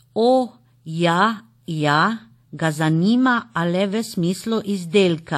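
Throughout the speech, nothing is heard above 16.5 kHz, and two different coding smears overlap. The cause is likely transcoding between lossy codecs, the sound fitting a WMA 1 encode near 64 kbit/s re-encoded as Vorbis near 54 kbit/s.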